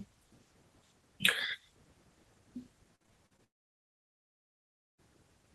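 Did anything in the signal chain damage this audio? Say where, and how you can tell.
Yes. Repeated packet loss on the network link hits the speech from 2.95 to 3.40 s: five short holes, the longest 47 ms, each patched by stretching the previous sound. About 29% of that stretch is filled in, so it turns choppy.

A long network dropout follows, likely a link that stopped delivering audio, from 3.44 to 5.0 s. The last sound is briefly continued as a fading buzz or hiss, then about 1.5 s of near-silence, and the speech resumes with that portion missing.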